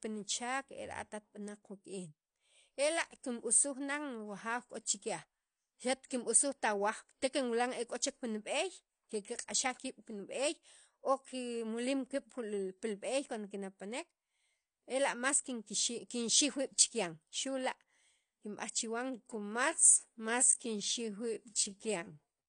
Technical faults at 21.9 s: AAC compression; time-stretched section

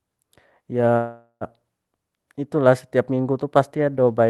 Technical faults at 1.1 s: call audio freeze

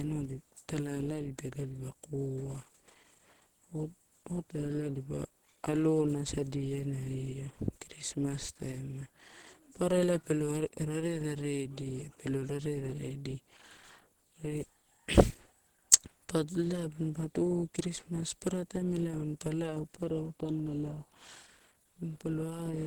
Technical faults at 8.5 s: Opus compression

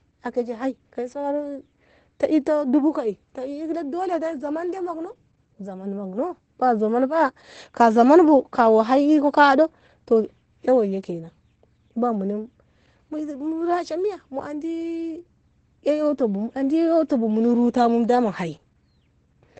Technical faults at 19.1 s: Opus voice compression

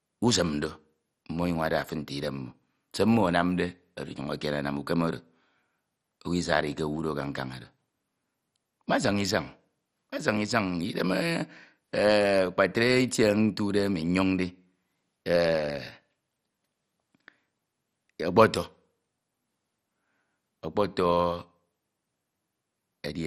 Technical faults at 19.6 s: MP2 compression

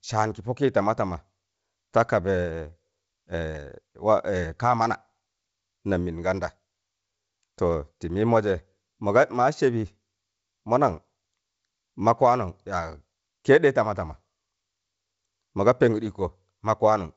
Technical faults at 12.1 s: none

